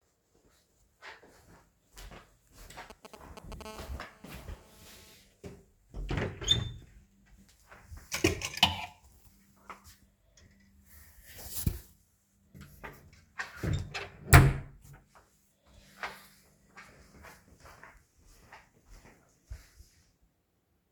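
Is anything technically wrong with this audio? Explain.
Yes, a nearby 2G mobile phone is interfering with the audio in two stages.

From 2.9 to 3.62 s there are GSM signalling bursts. A phone handling network signalling emits short clusters of radio pulses, and something in the audio path demodulates them like a crude detector. The result is a galloping, stuttering run of ticks and brief 217 Hz buzz fragments laid over the sound. It is quite prominent, at roughly 10 dB below the wanted signal.

From 3.65 to 5.14 s this becomes a continuous GSM phone buzz. Once the call is established, the phone transmits its time-slot bursts steadily at about 217 per second, and the rectified pulse train turns into a constant, harsh, raspy 217 Hz tone rich in harmonics. It has no relation to the sound being recorded. It sits about 21 dB below the signal, quieter than the earlier bursts but unbroken.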